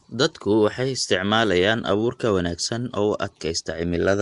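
Throughout the speech there is a rough, hissy halo and a smeared, underwater quality, and the damage is plainly audible. This is likely Nellymoser compression, the old Flash microphone codec, at a rate that fits about 44 kbps. Coding each 256-sample block with a fixed two bits per sample starves the weaker bands, which are then filled with noise. A spectrogram shows nothing above 10.6 kHz, with grainy, noise-filled patches between the stronger speech bands.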